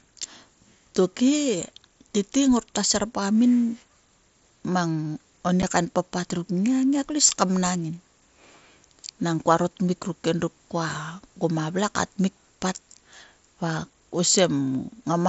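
At 5.62 s, just after "mang oni", there is a case of unconcealed Bluetooth headset packet loss. A gap of about 7.5 ms, consistent with one lost packet on the mSBC link, was filled with silence or an idle pattern rather than concealed, leaving a brief hole with hard edges.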